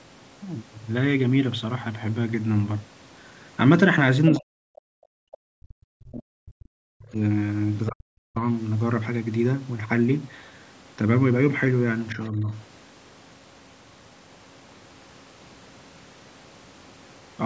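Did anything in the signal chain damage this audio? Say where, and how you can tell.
Yes. At 4.26 to 4.30 s a brief scrap of a second voice cuts in, about 10 dB below the main speech. That is most likely the other side's voice leaking through: the far end was playing on this device's loudspeaker, and the echo canceller in the call processing stage left some of that loudspeaker sound in the microphone signal, so a fragment of it passed through.

Right after that, from 4.37 to 7.18 s, the main speech sinks away, falling by around 40 dB at worst and breaking up for roughly three seconds. It happens again at 7.89 to 8.38 s with a similarly deep drop, and more mildly at 12.15 to 12.51 s, where it dips only about 5 dB. This pattern is likely speech suppressed in double talk. With both sides talking at once, the echo canceller couldn't separate the near talker from the echo and attenuated everything. 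The call processing's band limit, with nothing above 8 kHz, is a separate and expected part of the chain.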